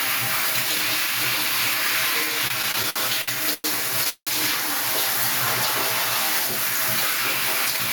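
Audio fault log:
Throughout: gain pumping. The level swings by around 5 dB. Loud and soft moments sit closer together than they should, and the whole clip sounds squashed. The likely cause is gain set far too high for the microphone, with a fast limiter or compressor pulling it down on every peak and releasing it afterwards.
2.47 to 3.66 s: repeated stalls (stutter). The sound catches and drags through this stretch, with eight brief hitches in which the last bit of audio is held and smeared on, the longest lasting about 105 ms. Together they add roughly 307 ms, about a quarter of the span, yet nothing is skipped. Packets were arriving late or too slowly, so the jitter buffer kept running dry, and the receiver stretched the previous sound each time until the next data arrived.
4.09 to 4.29 s: call audio freeze. The audio briefly turns into a fading continuation of the last sound, then drops to near silence for about 80 ms before resuming exactly where it left off. 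About 175 ms has been inserted in total, and none of the original is lost. This is likely a delay of around 175 ms in packet delivery that emptied the jitter buffer, with the receiver filling the wait until playback could continue.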